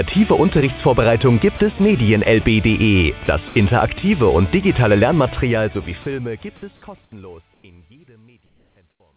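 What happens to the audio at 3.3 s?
At 3.26 to 3.28 s the sound briefly gives way to a short patch of steady noise or near silence, about 20 ms long, before returning. This is likely sound dropped by the voice detector: the sender judged that instant to be background, stopped transmitting, and the receiver filled the gap with comfort noise.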